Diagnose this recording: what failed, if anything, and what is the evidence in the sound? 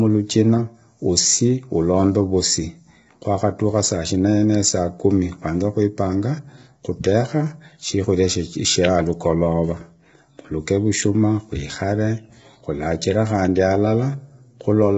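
Codec stage, throughout: the speech sounds rough and grainy, with noise filling the gaps between harmonics and nothing above 7.7 kHz. This is likely low-delay AAC compression at a starved rate, fitting about 16 kbps. Its short frames smear pitch structure. A plain low-pass filter would cut the top cleanly without the grain, and packet loss would come and go rather than last throughout.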